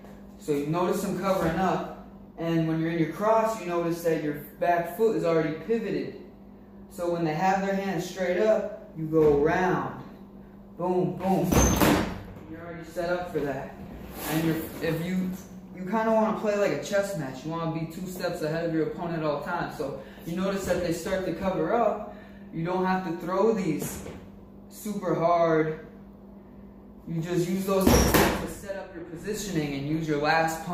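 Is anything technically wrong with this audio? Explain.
Yes. From 18.92 to 23.07 s there is a call bitrate drop: the encoder was starved of bits, consistent with roughly 128 falling to 27 kbps, so the audio turns coarse, watery and dull.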